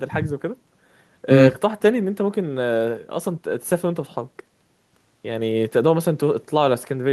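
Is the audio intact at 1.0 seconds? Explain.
Yes, the speech at 1.0 seconds comes through intact, with no dropout, click, distortion or other fault audible at that moment.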